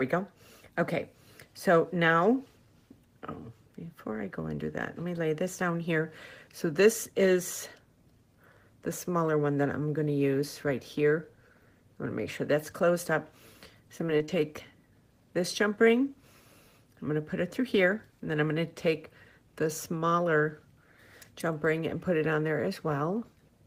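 Around 13.97 to 14.30 s there's a short burst of repeated packet loss, the robotic-sounding kind. What sounds like four quick dropouts, none longer than about 20 ms, land close together, and each one gets patched by stretching the last bit of audio forward. That concealment covers roughly a fifth of the stretch, so the sound turns choppy for that third of a second, with small pieces missing.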